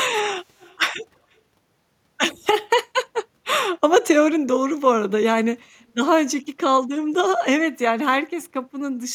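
Speech, with a faint copy of the voice trailing about 245 ms behind it from 0.58 to 0.78 s, well below the main signal. This echo leak is likely residue that a far-end speakerphone's echo canceller failed to remove.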